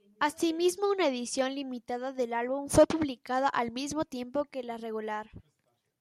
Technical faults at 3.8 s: none

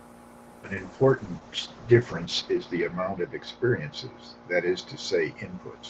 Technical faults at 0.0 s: none

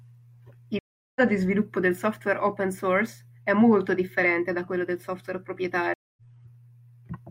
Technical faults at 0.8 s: stream reconnect

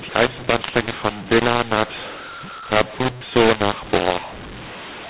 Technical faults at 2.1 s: mu-law and A-law mixed up

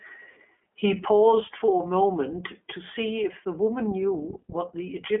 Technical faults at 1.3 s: iLBC codec

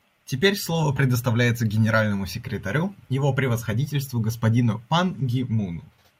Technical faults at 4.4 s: none

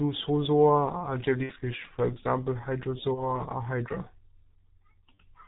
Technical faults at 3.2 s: G.723.1 codec; VoIP packet loss concealed by the speech codec

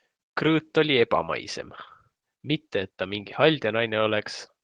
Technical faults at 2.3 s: none

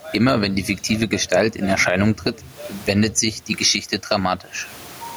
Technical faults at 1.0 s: gain pumping

